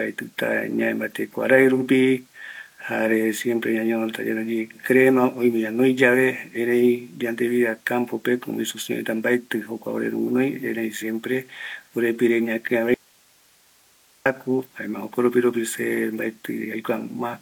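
At 12.94 s the speech cuts out abruptly in an audio dropout to a faint residue, likely a lost feed into a still-live path. Hiss roughly 35 dB down fills 1.31 s, showing as a sharp-edged, near-flat waveform and a faint broadband spectrogram band, until "jaema jokoropiropi se" at 14.26 s.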